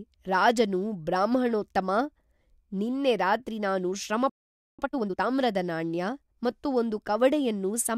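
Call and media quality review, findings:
Playback stall, 4.29 to 4.79 s, right after "ನಿನ್ನೆ ರಾತ್ರಿ ನಾನು". Speech cuts off mid-flow for about 0.49 s. Waveform flat, spectrogram a blank vertical band. Likely player buffer underrun or blocked audio thread starving output.

Time-compressed catch-up, 4.79 to 5.27 s, immediately after the stall. Speech hurried at 2x with pitch unchanged. Player drains backlog by cutting and cross-fading short segments. Spectrogram shows normal harmonic spacing but compressed syllable timing.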